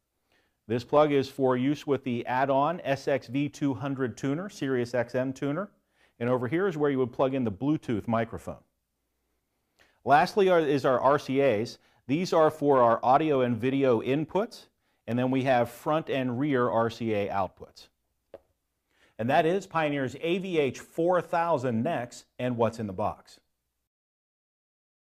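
Two devices likely running on separate clocks, roughly 100 ppm apart, let the buffer between them drift until a few samples, around seven, are dropped or repeated. From 0.97 s to 23.95 s, these clock drift buffer slips produce about fifteen clicks, one every 1.77 s.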